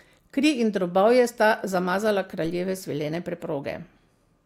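At 2.45 s there's a DC step: the zero line of the waveform suddenly jumps, shifting the whole signal by about -35 dBFS of offset, as you'd get from a converter recalibrating or an offset input being switched in. You hear it as a single low thump while the speech carries straight on. The offset doesn't hold. It drains away the way a 2 Hz high-pass would let it, so the baseline slides back toward zero.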